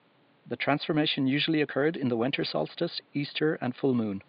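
No technical faults can be heard in the speech, and the only thing beneath it is background noise from the room, about 36 dB below the speech, which comes from the recording space rather than from anything going wrong in the system.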